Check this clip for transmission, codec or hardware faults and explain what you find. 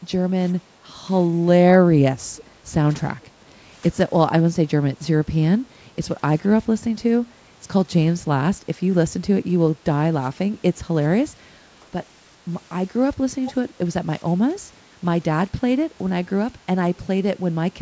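The speech carries two faults, both from echo cancellation on a speakerphone leg, heard through the usual call microphone processing with nothing above 8 kHz.

Background gated by the echo canceller, at 0.67–0.78 s, 5.59–5.74 s and 14.53–14.66 s: room sound briefly dips by about 6, 8 and 12 dB as the canceller clamps the microphone.

Echo leak, at 2.36–2.44 s, 3.21–3.27 s and 13.45–13.53 s: faint-to-noticeable scraps of voice returning 421 ms late, likely residual loudspeaker pickup the canceller failed to remove.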